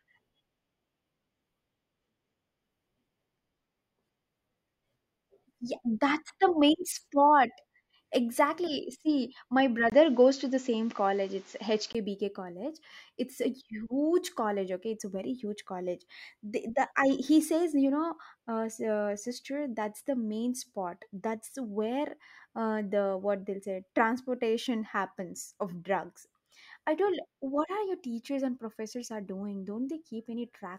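At 9.90 s there's a quick 20 ms gap, then the speech turns dull with nothing above 7.6 kHz, shifts level by around 5 dB and picks up faint new noise about 35 dB down, until 11.95 s. That's likely the input switched to a poorer device, then back.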